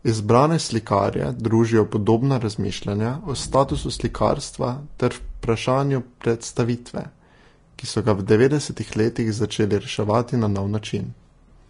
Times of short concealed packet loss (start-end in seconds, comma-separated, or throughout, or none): none